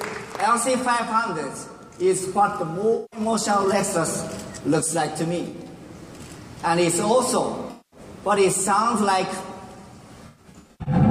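AAC frame loss with concealment hits four times: 2.95–3.20 s, 5.49–5.67 s, 7.71–7.99 s and 10.26–10.94 s. Each time the decoder, missing compressed frames, rebuilt the gap from the last good spectrum, so the sound turns smeared and phasey rather than dropping to hard silence as a plain dropout would. The second and fourth losses are scattered, giving a stuttering, patchy texture, with about 0.38 s missing across the final stretch.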